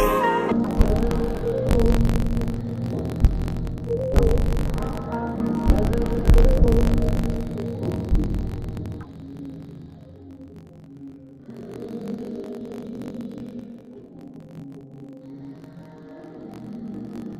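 From 0.52 s onward, interleaved audio read as planar splits each 21.3 ms block into halves, so the sound plays an octave low, doubled and choppy.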